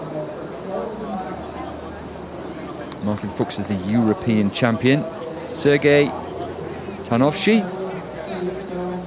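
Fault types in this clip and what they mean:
Nothing stood out as a fault on listening to this audio.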